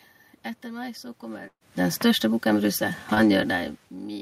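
A burst of packet loss runs from 1.47 to 1.63 s, just before "den største bukken". About 140 ms of speech never arrived. The receiver extended the last sound for roughly 130 ms as a fading buzz or hiss, with about 70 ms near-silent, then resumed later with that stretch missing.

A short concealed packet loss follows at 3.15 to 3.18 s. About 20 ms failed to reach the decoder in time. The receiver patched the hole with roughly 19 ms continued from the preceding sound before blending back, leaving a brief smear or wobble.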